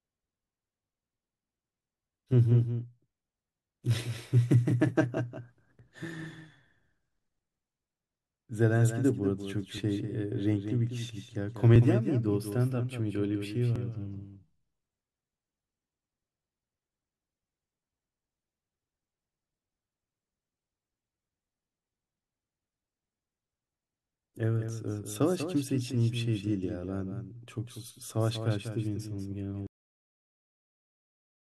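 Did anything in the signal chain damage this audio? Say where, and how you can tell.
Yes. A doubled audio track runs through the whole clip. A second full-band copy trails the speech by about a fifth of a second, roughly 10 dB quieter. Unlike room echo, it has no decay or reverberant colour. The likely cause is a slower second capture path mixed back in at the driver or buffer stage.

Overlap between stream segments shows up at the network or streaming stage as tiny skips at 5.79, 9.78, 11.76 and 13.76 s. Each one lasts under 20 ms. The spacing fits 2-second segments whose time stamps overlap, so the player trims real audio and the waveform jumps. A dropout would leave a gap of silence, but these are skips with no gap.

A cut-off end appears at 29.67 s, where the audio stops mid-sound and drops straight into digital silence with no decay. That points to the final buffers never being written at the storage or playback stage. 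A deliberate fade would taper off, and this stops abruptly.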